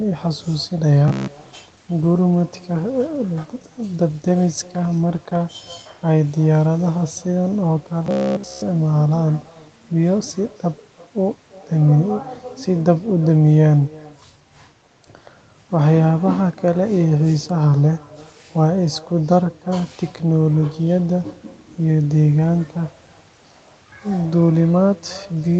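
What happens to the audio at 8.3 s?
Robotic sound from repeated short buffers runs from 8.06 to 8.62 s. New audio likely arrived too seldom, so the playback kept looping a short stretch instead of advancing, with almost nothing new getting through. The sound collapses into a rigid, metallic buzz at 66.7 Hz, which fits a buffer of about 15 ms repeating over and over.

Echo with no canceller also runs under this moment, as it does throughout. The far end's loudspeaker feeds its microphone and nothing removes it, so a thin copy about 24 dB quieter trails the sound by roughly a third of a second.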